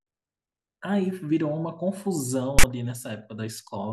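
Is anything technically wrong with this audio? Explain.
Yes. At 2.59 to 2.64 s the speech is interrupted by file tags played as audio, a burst about 50 ms long. A block of text metadata has been decoded as sample values. Because text bytes cluster in a narrow range, the waveform sits pushed to one side rather than centred, giving a loud, harsh rasp with abrupt edges. That lopsided offset and the square start and stop distinguish it from a single click or from ordinary clipping.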